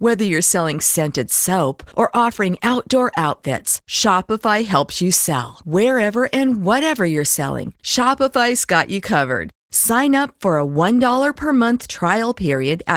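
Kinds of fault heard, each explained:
Opus voice compression: coarse low-rate coding of the speech excitation, fitting roughly 16 kbps in hybrid mode, leaves the speech plainly hoarse and slightly robotic throughout.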